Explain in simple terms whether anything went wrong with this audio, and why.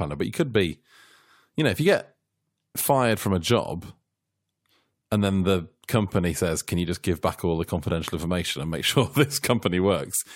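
Nothing went wrong here.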